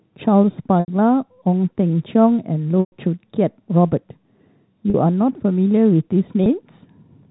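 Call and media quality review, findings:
Packet loss with pitch repetition: packet drops at 0.80–0.88, 2.80–2.91, 4.90–4.94 and 6.44–6.46 s (80, 120, 40, 20 ms; fits 20 ms packets). Concealment loops the last pitch period, giving held, buzzy speech. The 120 ms gap fades out before speech cross-fades back.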